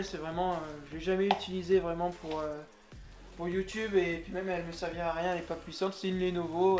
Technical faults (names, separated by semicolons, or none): none